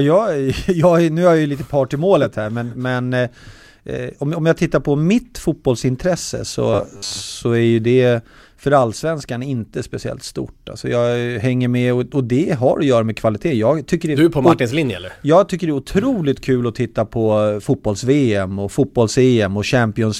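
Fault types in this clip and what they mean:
Robotic sound from repeated short buffers: from 6.73 to 7.24 s, after "tittar på mitt fotbollsintresse", the speech becomes a rigid metallic buzz at 100 Hz. Audio likely arrives too seldom, so a 10 ms slice is replayed, filling about half this stretch.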